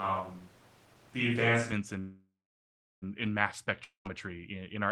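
A switch to a distant microphone is already under way when the clip opens and lasts until 1.72 s. The speech sounds roomy and hollow, thinner in the bass, at much the same level, with room noise roughly 30 dB below it. The close microphone's feed was likely lost, leaving a farther one to carry the sound.

A call audio freeze runs from 1.99 to 3.04 s, ending just before "in mass". The last sound is stretched into a fading buzz, then about 0.73 s of silence, filling about 1.03 s in all. Packets were likely delayed until the jitter buffer ran dry. Speech resumes where it stopped, with nothing missing but everything after arriving about a second late.

A long network dropout follows from 3.84 to 4.07 s, between "in mass" and "in in our". The sound smears into a brief decaying buzz and then 0.13 s of silence, about 0.21 s of fill. Audio likely stopped arriving, and about 0.22 s of speech never plays, so the resumed speech jumps ahead.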